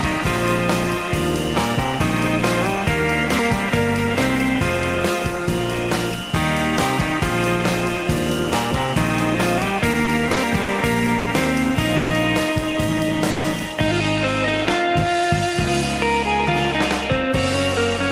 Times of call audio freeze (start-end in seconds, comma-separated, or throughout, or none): 11.96-12.12, 13.30-13.46